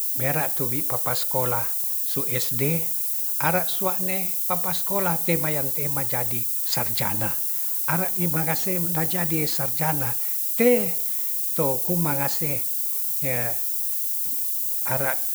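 From start to finish, the speech has been reduced to a very low bit depth with noise shaping. Only 5 bits describe each sample, and the large rounding error from that coarse quantisation is fed back so it is pushed up toward the high frequencies. The result is a steady, thin hiss that climbs sharply toward the top of the band, and it is roughly as loud as the speech itself, so it sits right alongside it throughout.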